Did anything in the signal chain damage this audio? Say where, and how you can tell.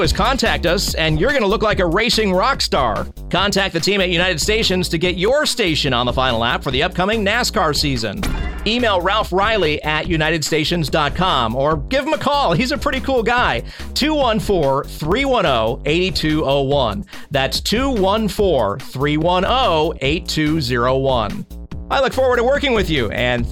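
Yes. From 0.91 s to 22.76 s a click recurs every 1.09 s, about twenty times. Each shows as a thin vertical line on a spectrogram and a step in the waveform. The likely cause is clock drift buffer slips at the buffer stage. Two mismatched clocks force a short block of samples to be dropped or repeated.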